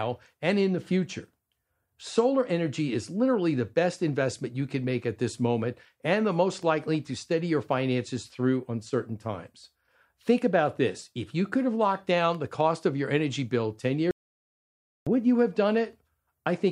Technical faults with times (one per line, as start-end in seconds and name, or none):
14.11-15.07 audio dropout to silence